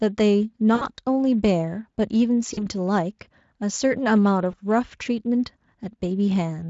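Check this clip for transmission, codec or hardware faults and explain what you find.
There are three short dropouts where the speech briefly turns into a buzzy, smeared tone that fades and then recovers: 0.75 to 0.85 s, 2.53 to 2.66 s, and 4.51 to 4.55 s. This is VoIP packet loss concealed by the speech codec. The gaps last about 60 ms, 40 ms and 20 ms, which fits three, two and one lost 20 ms frames. The Speex decoder filled each gap by repeating its last pitch and filter shape at falling gain. Because each frame builds on the previous one, the sound stays weak or distorted just after packets resume. The underlying Speex coding is only lightly audible.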